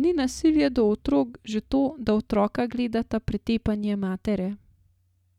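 No technical faults can be heard anywhere in the speech recording.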